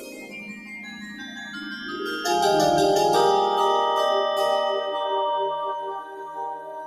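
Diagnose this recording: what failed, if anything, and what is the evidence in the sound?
The failure sits in call processing: a noise suppressor built for speech was left on, and it is treating this sound as noise. Sudden attacks pass, but sustained parts and tails are pulled down, and the gain swings by something like 15 dB across the clip, giving a pumping, fluttering quality. On a waveform the envelope breathes unevenly. On a spectrogram, steady bands fade and reappear in patches instead of holding level.

The same suppressor cuts specific stretches more heavily than the rest. From 0.0 to 1.97 s the level sinks by up to about 12 dB, and from 6.0 s to the end at 6.87 s by up to about 8 dB. These held or decaying portions get misjudged as background. A waveform shows those regions visibly shrunken, with decays truncated early. A spectrogram shows the tails darkening abruptly rather than fading naturally.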